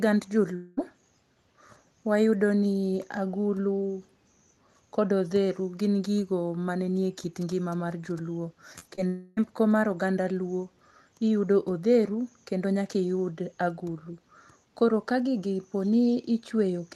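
From 0.55 to 0.79 s the sound gives way to a smeared, buzzy continuation that fades without dropping to silence. It is a long network dropout, likely a stretch of about 220 ms that never arrived, and it is far longer than a concealed packet blip. Between 8.79 and 8.83 s and again between 8.95 and 8.99 s there are brief wobbles. These are short concealed packet losses, each filling roughly 20 ms by extending the previous sound before blending back. A second long network dropout runs from 9.07 to 9.39 s, where about 300 ms is bridged by a decaying smear.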